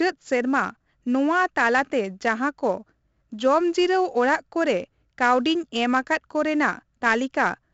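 The whole clip carries heavy 4-bit ADPCM compression: gritty hiss riding every loud syllable, roughened attacks, and nothing above 7.7 kHz, which fits a 64 kbps, 16 kHz stream.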